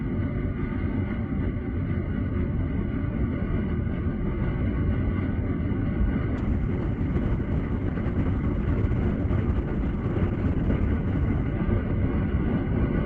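An everyday-sound recording carried over a WebRTC call path using Opus shows a call bitrate drop from 6.42 s to 12.07 s. The audio turns coarse and watery, and the top end narrows from about 12 kHz to 8 kHz, consistent with the encoder falling from roughly 32 kbps to 11 kbps and staying at its lowest for about 4.3 s. Unlike packet loss, nothing drops out or repeats. The sound stays continuous and only loses detail until the bitrate recovers.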